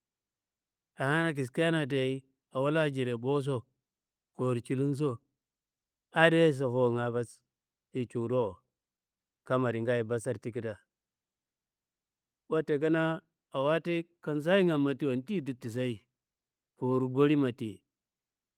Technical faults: none

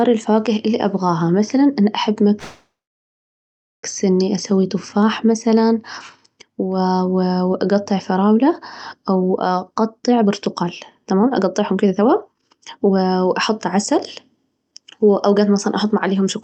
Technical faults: call audio freeze; jitter buffer speed-up

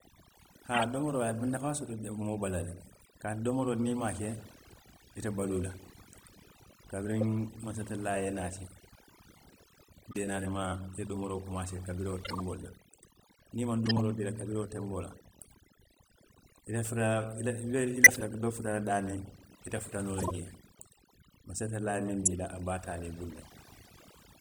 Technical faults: overdone noise removal; corrupt frame decoded

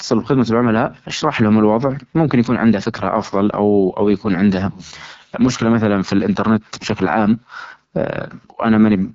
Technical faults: AMR wideband (HD Voice) codec

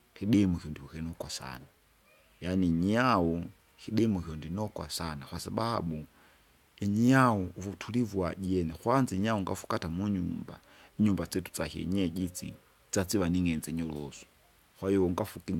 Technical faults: none

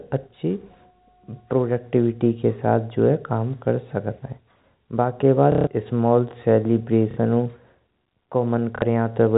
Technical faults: packet loss with last packet repeated

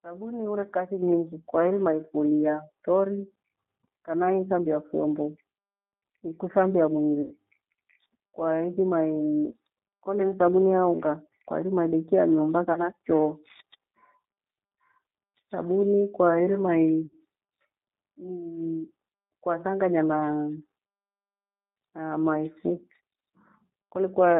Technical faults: G.729 codec; microphone volume stepped up; VoIP packet loss concealed by the speech codec

